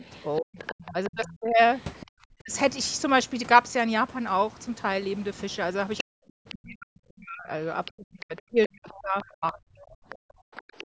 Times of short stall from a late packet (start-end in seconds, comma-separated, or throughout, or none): none